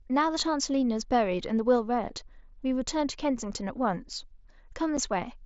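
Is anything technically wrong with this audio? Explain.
Yes, there's one unconcealed Bluetooth headset packet loss at about 4.97 s. Roughly 7.5 ms of the speech is gone, which fits a single dropped frame between headset and phone. Nothing filled the gap, so you get a tiny hole with hard edges. The link itself is the wideband mSBC codec, so the speech carries up to 8 kHz.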